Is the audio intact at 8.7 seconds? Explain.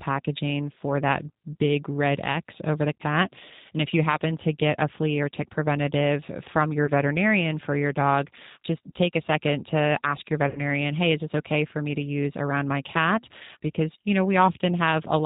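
No. At 8.7 seconds the speech is still carrying G.729 codec damage, which runs through the whole clip. The codec rebuilds each 10 ms frame from a vocal tract model, a pitch predictor and a few coded pulses, not from the original waveform. Nothing above 4 kHz survives, so the sound is dull. The voice is intelligible but plainly rough and synthetic. This fits the 8 kbit/s rate such a codec runs at.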